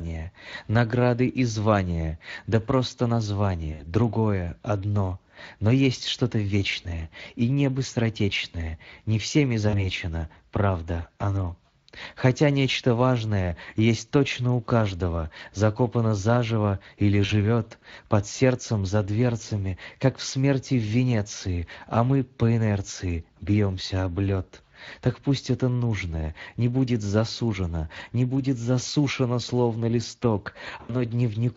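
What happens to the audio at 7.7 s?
At 7.7 s, as across the whole clip, the speech runs through the Speex codec, whose CELP coding has too few bits to model the excitation faithfully, which fits a bitrate around 20 kbps. The damage is plainly audible, leaving the speech grainy and roughened.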